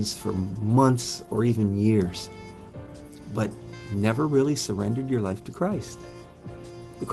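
Between 1.17 and 1.99 s the audio shows repeated stalls (stutter): seven brief hold-ups, none longer than 12 ms, adding about 65 ms in total. Packets arrived later or slower than playback consumed them, so the jitter buffer kept running dry and the receiver stretched the last sound to cover each gap. Nothing is lost, but about 8% of that span is filler, which makes the passage drag and judder. The call codec's bandwidth tops out around 12 kHz.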